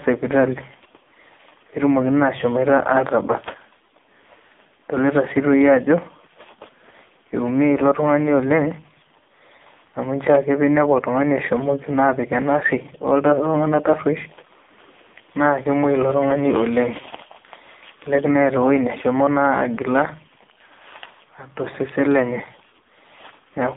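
From start to end, the speech passes through an AMR narrowband mobile codec. Nothing above 3.6 kHz survives. Heavy coding leaves it buzzy and synthetic, which fits a rate near 6 kbps.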